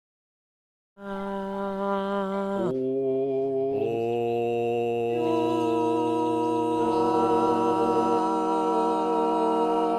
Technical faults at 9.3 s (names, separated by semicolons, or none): none